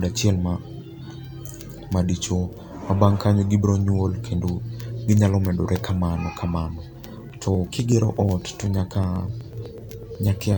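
From about 7.05 s through to 10.53 s, the speech picks up periodic USB or driver dropouts: tiny gaps roughly every 0.124 s, so about eight a second, around thirty in all. Something is blocking the bus or the audio driver on a fixed cycle, and each time around a millisecond of audio is simply skipped rather than padded with silence. You hear it as a steady ticking running under the voice, sounding only where there's signal.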